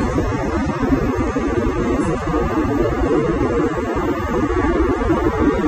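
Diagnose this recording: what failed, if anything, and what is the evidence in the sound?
The codec stage is the likely culprit: AAC compression damage runs through the whole clip. Nothing remains above 14.8 kHz, and what is left sounds smeared and fizzy, which fits AAC-LC quantising coarsely at about 24 kbps. A plain low-pass filter would dull without warbling.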